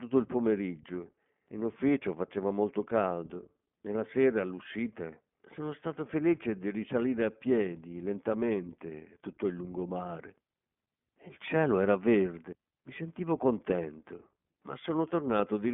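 Speech, and the whole 16 seconds has gone through the iLBC codec. Nothing reaches above about 3.7 kHz, and the line band sits at roughly 150 Hz to 3.4 kHz, so it has that narrowband phone sound. The codec damage is plainly audible: the voice comes out rough and a bit synthetic because each 20 ms frame's excitation is coded on its own, independent of the frame before. That behaviour fits the 15.2 kbps mode.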